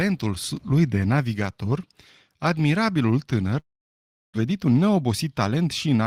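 At 3.59 s the speech breaks off, and what follows until 4.38 s is a long network dropout, most likely incoming audio stalling on the link. The receiver stretches the last sound into a fading buzz and then mostly silence. When the speech returns, about 600 ms of it is simply gone, and the playout ends up running with more delay than before, something like 150 ms extra.

From 4.45 s to 6.02 s you get the jitter buffer speed-up that follows. With that extra backlog piled up, the receiver trims away tiny pitch-period-sized slivers over and over to catch up. The pitch stays where it was, but the talking runs about 8% fast and sounds a bit rushed. Over that stretch it works off the backlog of roughly 150 ms.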